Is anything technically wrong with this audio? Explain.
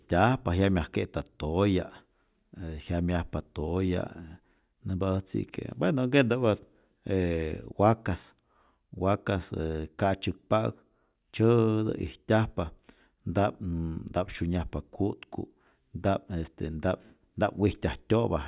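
No, nothing technically wrong can be heard anywhere in this recording.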